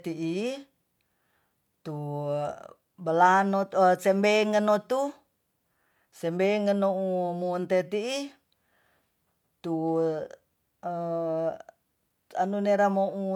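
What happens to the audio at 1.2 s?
At 1.2 s the speech carries the same fault heard throughout: low-bitrate audio saved at a high bitrate, likely an HE-AAC stream near 48 kbit/s re-encoded as 192 kbit/s MP3. The first codec's losses persist, and a spectrogram shows nothing above 20.4 kHz.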